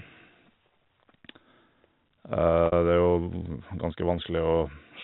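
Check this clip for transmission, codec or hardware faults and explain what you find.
One transmission fault is audible: packet loss with pitch repetition from 2.66 to 2.72 s. About 60 ms of audio is missing, which fits three 20 ms packets. The receiver filled the gap by repeating the last pitch period and fading it out, so the speech briefly holds on a slightly buzzy, static tone before normal audio resumes. The G.711 A-law telephone coding caps the band at 4 kHz, and its quantisation noise is faint.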